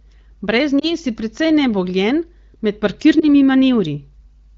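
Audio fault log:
0.79 to 0.90 s and 3.20 to 3.26 s, lost AMR speech frames: at each spot a single 20 ms frame is missing, and the decoder fills it by repeating the last pitch and vocal-tract settings at lower gain, so the sound briefly dips or warbles. On a spectrogram the harmonics smear and flatten there, and the waveform envelope sags.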